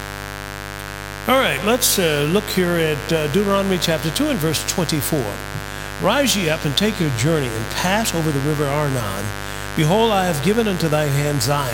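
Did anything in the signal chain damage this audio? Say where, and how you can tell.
Yes. The damage is in the analogue wiring: a dimmer, rectifier or unshielded run has let mains buzz into the signal path. Switching spikes arrive twice per 50 Hz cycle, so the interference is a 100 Hz-rate pulse train whose harmonics of 50 Hz climb into the kilohertz range. It sits under the whole clip as a steady, raspy buzz, loud enough to compete with the wanted sound at roughly 10 dB below it.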